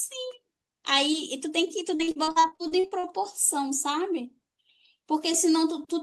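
From about 1.95 to 3.06 s the speech hits repeated packet loss, giving that robotic sound. Around a dozen short holes, the longest about 44 ms, get patched by stretching the previous audio, so roughly 43% of the stretch is filler and it turns choppy.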